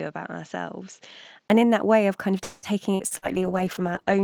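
A short speech clip, about 4 seconds, with three separate problems stacked into it. From 0.0 to 1.5 s it sounds like an input switched to a poorer device, likely a fallback mic or a headset's call profile: nothing comes through above 7.6 kHz, so it's dull and boxy, the level sits roughly 5 dB lower, and there's a faint new noise floor, somewhere around 45 dB down. You can also catch a 20 ms silence right at the switch point. Then from 2.43 to 3.25 s there's repeated packet loss giving that robotic sound. There are four holes in quick succession, and each one gets patched by stretching out the previous bit of audio. That adds up to about 305 ms of concealment, roughly 37% of the stretch, with the longest hole at 193 ms. Around 120 ms is simply missing, so it's choppy with pieces dropped out. Overlapping the tail of that, from 3.18 s to the end at 4.24 s, there's a call bitrate drop. The sound goes rough and watery, and the top end collapses from the full 20 kHz band to about 8 kHz. 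That fits the encoder being pushed from 48 kbps down to 12 kbps, and it stays at that low rate for the remaining second or so without recovering.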